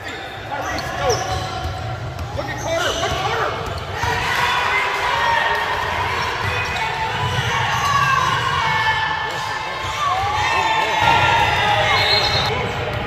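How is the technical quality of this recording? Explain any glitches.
The recording has two glitches, a jump in playback and a burst of clicking.

At 4.21 to 4.23 s there is a skip ahead. Roughly 0.7 s of audio was dropped in transit or discarded by an overflowing jitter buffer, and the sides were spliced directly with no fill. On a waveform the envelope changes abruptly at the join. A spectrogram shows a hard vertical seam.

From 11.02 to 11.88 s a train of clicks appears, about seven per second at an uneven pace, around seven in total, peaking a few dB above the surrounding sound. The likely cause is interference or a faulty connection or power supply. A waveform shows similar narrow spikes, and a spectrogram shows thin broadband vertical lines.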